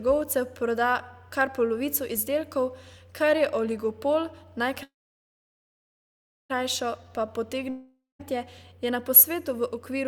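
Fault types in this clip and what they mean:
Call audio freeze: Packets were most likely held up in transit until the jitter buffer ran dry, so the receiver kept extending the last speech sound as a fading buzz. From 4.83 s to 6.52 s the speech stalls; for about 1.59 s of that stretch only silence remains. When the packets arrive, speech resumes exactly where it stopped. Nothing is lost, but everything after this point runs about 1.66 s later.
Jitter buffer slow-down: With its reserve running low, the receiver rebuilt the buffer by repeating single pitch periods several times in a row instead of passing the audio straight through. Between 7.04 s and 7.28 s this stretches the speech by 44 ms, so it plays at 85% speed. The pitch stays the same, but the sounds there come out drawn out.
Long network dropout: This was likely a gap in delivery long enough that half a second of speech never reached the receiver. 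From 7.69 s to 8.21 s, the receiver carries the last sound forward as a decaying buzz that thins to about 0.18 s of silence. Speech then returns further along, with about 500 ms of the original gone rather than delayed.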